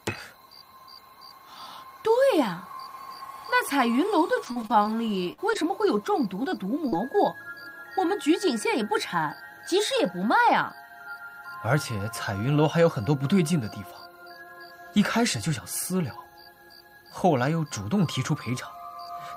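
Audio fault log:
4.45–7.09 s, repeated packet loss (robotic sound): about ten short holes fall in quick succession across this stretch, the longest about 47 ms. Each hole is papered over by stretching the sound just before it, so roughly half a second of the span is patched or rebuilt, giving a choppy texture with pieces missing. Unlike a single dropout or clean gating, the repeated smeared patches recur rapidly rather than leaving one silent gap.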